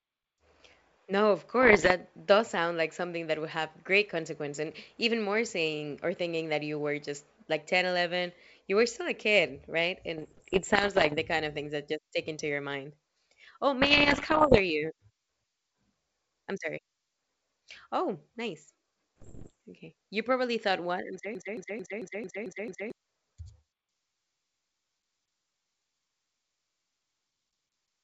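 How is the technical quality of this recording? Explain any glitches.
The speech carries two kinds of glitch, heard over a wideband telephone-style channel whose G.722 coding itself adds at most a faint upper-band hiss.

Bit errors on an ADPCM link occur at 1.62 to 1.92 s (ending just before "does sound like something"), 10.18 to 11.16 s (between "still a kid right" and "the kind of things"), 13.82 to 14.61 s and 19.18 to 19.52 s. Corrupted bits throw the ADPCM decoder's step size and prediction off track, so each error rings on briefly instead of clicking once. The result is pops, gritty bursts and short level jumps. The 13.8 s stretch is the roughest, with an error rate around two percent against one to one and a half percent elsewhere.

A broken-record loop runs from 21.35 to 22.92 s. A 222 ms fragment plays seven times back to back, identically each time, and the speech that belonged in that gap never arrives. 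The likely cause is a stalled player or stream that kept resending the last chunk it held until fresh data resumed, which gives a stuttering, mechanical repetition.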